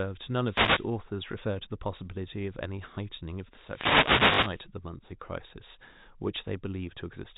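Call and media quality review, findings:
Wireless microphone noise hit, 0.45 to 0.91 s and 3.57 to 4.70 s. Swish of static rising over the speech, longer in the second event. Component: analogue FM radio link. Mechanism: reflected paths cancel the carrier, receiver noise climbs, deep fade breaks into clicks and masks the speech.

Packet loss with last packet repeated, 1.32 to 1.34 s and 4.34 to 4.38 s. Small blip on the first, brief robotic stutter on the second. First gap 20 ms, which points to one lost 20 ms packet. Second gap 40 ms, which points to two lost packets, and it buzzes near 50 Hz. The second sits inside the later noise hit. Component: network jitter buffer or concealment. Mechanism: the last packet is replayed out of step with the pitch. G.711 mu-law path at 64 kbps shows only faint narrowband coding.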